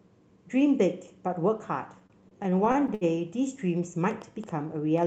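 A speech recording carries two distinct faults. Between 1.99 and 3.04 s there are repeated stalls (stutter): the jitter buffer runs dry twelve times, each gap up to 70 ms, and the receiver stretches the last sound to fill about 238 ms, nearly a quarter of that stretch. Unlike dropouts, nothing is lost, so the speech drags and stutters rather than going silent. From 4.11 s to the end, a train of clicks of much the same shape ticks at roughly 7.9 per second with uneven spacing, peaking at about the speech level. These clicks sit over pauses as well as speech, which sets them apart from network glitches, and point to likely interference or a faulty connection or power supply.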